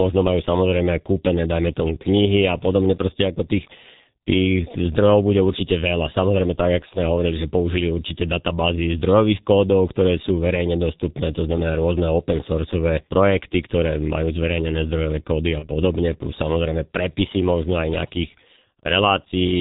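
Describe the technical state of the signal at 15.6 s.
At 15.59 to 15.69 s, between "zverejnené zdrojové kódy a" and "plus samozrejme prepisy možno", there is VoIP packet loss concealed by the speech codec. About 30 ms of audio went missing, which fits a single lost G.723.1 frame. The decoder filled the gap by repeating its last pitch and filter settings at falling gain, so the speech briefly turns into a buzzy tone or coloured noise that fades. On a waveform the envelope sags. On a spectrogram the sound becomes flat and stretched before the speech recovers over the following tens of milliseconds.

The whole span sits inside heavy G.723.1 codec damage at 6.3 kbit/s. The spectrogram shows nothing above 4 kHz, and the spectral envelope changes in coarse 30 ms steps. This makes the speech muffled and hoarse, with blurred consonants, both around the dropout and within it.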